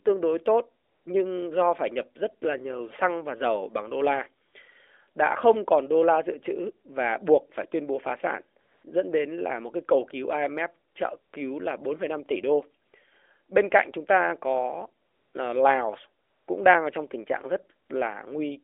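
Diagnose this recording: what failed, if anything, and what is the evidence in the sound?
AMR comfort noise appears in the call-processing and codec stage, in nine pauses between 0.84 s and 17.9 s. Each lasts 40 to 280 ms, the first falling between "đối tốt" and "nhưng do phải nhập". In each gap the phone's voice detector judged the talker silent and stopped sending speech frames. The receiver then filled the gap with smooth synthetic noise shaped from a rough level and spectrum, so the real background drops out. This happens within an otherwise normal narrowband AMR-NB path limited to about 3.5 kHz.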